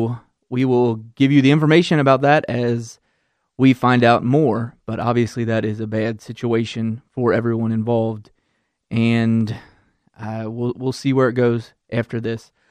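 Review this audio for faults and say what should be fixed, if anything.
A few samples at a time were likely lost from the stream, at 0.60 s (just before "will give you the"), 5.02 s (just before "obviously that is a"), 8.17 s (right after "bad situation for everyone") and 9.41 s. Each gap is a fraction of a millisecond, far too short to remove any speech. The waveform jumps straight to a later value, producing four dropped-samples clicks, each a single sharp tick. Prevention: give the capture and transfer path enough buffering and priority that no samples are discarded under load.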